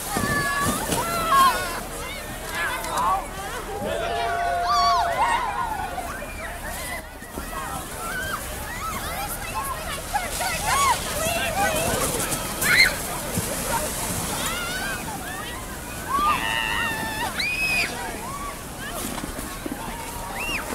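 At 7.00 s a sudden gain jump drops the level by about 6 dB until 7.34 s, likely a gain change applied without a ramp; background noise steps down together, unlike compressor pumping.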